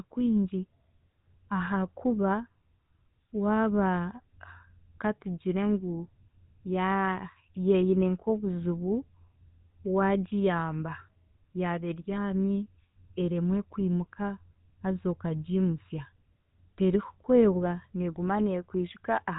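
From start to finish, the speech carries the mark of the GSM full-rate codec, and the damage is plainly audible. The coder models the vocal tract and excites it with a sparse train of regularly spaced pulses. Much of the fine detail of the excitation is thrown away. The result is a buzzy, gravelly roughness on the voice. Nothing above 4 kHz survives, so the sound is dull and boxy. The grain fits a 13 kbps rate.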